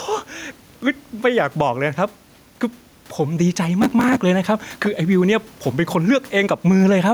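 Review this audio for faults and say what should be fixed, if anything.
Gain pumping runs through the whole clip. The background room noise sits about 38 dB below the speech. The level swing is around 5 dB. Loud and soft passages sit too close together, so the speech sounds squashed. The likely cause is input gain set far too high, with a fast limiter or compressor clamping down on every peak. Lowering the microphone gain so the limiter rarely engages would prevent this.

Processor overload crackle appears from 3.82 to 4.17 s. It is a gritty tearing that rides on the speech and stops when the load passes. Each tick is a tiny hard-edged gap where audio was skipped. The rate and texture point to very short buffers of a millisecond or two, with about 30 deadlines missed over that stretch. The processor could not keep up during that moment. A larger audio buffer, or less competing load on the machine, would prevent this.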